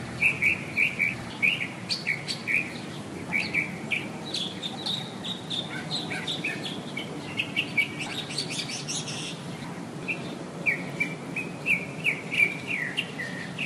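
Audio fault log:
Throughout: resampler restarted on every block. The conversion from 24 kHz to 48 kHz treats each 20 ms block separately. Its edges lack true neighbouring samples, so each boundary carries a small error. These repeat at 50 Hz, giving a buzz that rides only on the signal.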